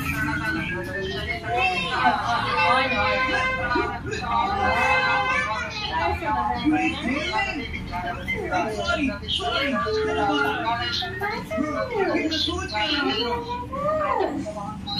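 No technical faults can be heard anywhere here.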